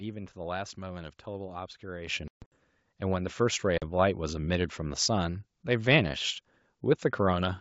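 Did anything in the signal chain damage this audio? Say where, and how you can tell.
Yes, two kinds of damage, both after the microphone. First, call processing: at 2.07 s the microphone volume steps up by about 10 dB in a single jump, and the sound and the background noise rise together. That shared lift is the giveaway. The software decided the input was too quiet and raised the device's input gain in one step, rather than the talker getting louder.

Second, the network: packet loss on an ADPCM call. From 2.28 to 2.55 s about 200 ms is missing, scattered over 240 ms, with the longest hole 140 ms, which sounds like something around ten packets. A shorter 40 ms gap sits at 3.78 to 3.83 s. The holes cut in as hard-edged silence, and the sound coming back is slightly rough until the decoder's predictor and step size realign with the sender, within tens of milliseconds. The G.722 wideband coding underneath, at 64 kbit/s, is working as intended.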